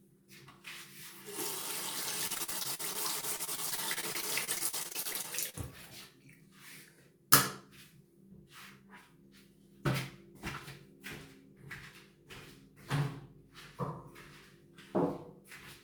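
Repeated packet loss (robotic sound) runs from 2.27 to 5.55 s. About 30 short dropouts, the longest 45 ms, are each patched by extending the preceding sound. This leaves a choppy texture with pieces missing. On a spectrogram, repeated smeared or frozen slices break the detail. The waveform shows stuttering, copied segments across roughly a fifth of that span.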